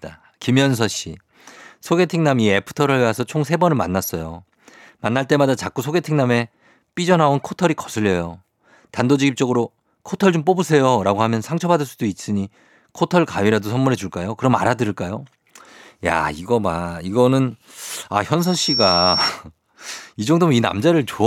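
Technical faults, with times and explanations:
18.39–19.31 s, loudspeaker feedback squeal: a single 5.5 kHz tone swells within about a third of a second to roughly speech level. Unlike a steady interference whine, it grows on its own because the microphone-loudspeaker loop exceeds unity gain.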